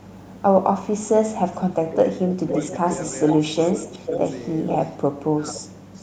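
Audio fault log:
0.00–0.42 s, 2.69–4.32 s, 4.66–4.97 s, 5.66–6.02 s: echo leak. A copy of the speech returns about 0.49 s late, faint at the edges (about 35 dB down), strong mid-clip (about 10 dB, then 5 dB below), likely from a loudspeaker echo canceller letting residual pickup through.
1.45–2.85 s, 3.33–4.11 s, 5.18–5.57 s: speech suppressed in double talk. The talker's level dips by about 15 dB, and about 20 dB in the last span, for roughly half a second, then 0.3 s each, likely because the canceller mistook overlapping speech for echo and attenuated both.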